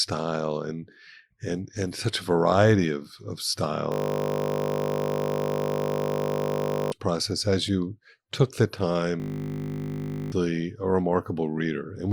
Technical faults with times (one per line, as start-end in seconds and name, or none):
3.92-6.92 system hang loop
9.20-10.32 system hang loop